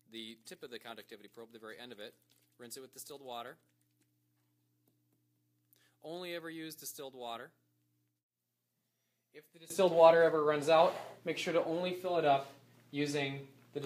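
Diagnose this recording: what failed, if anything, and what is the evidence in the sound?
From 0.0 to 9.70 s the sound drops about 23 dB below the rest of the clip. It then returns to full level. The likely cause is one channel inverted in the analogue wiring. Shared content cancels in the mono sum. Only the mismatch between the channels remains.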